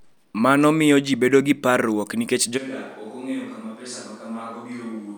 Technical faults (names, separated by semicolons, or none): switch to a distant microphone